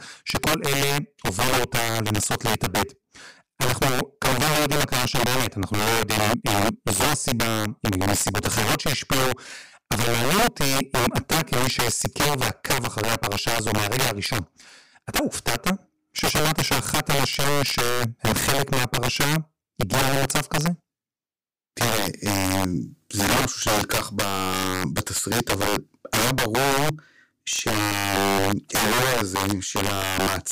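Throughout the speech, a gain stage pushes the signal about 10 dB past the integer limit without saturating, so it suffers integer overflow: a small fraction of samples wrap to the opposite extreme, turning every loud syllable peak into a violent, harsh crack far sharper than ordinary clipping.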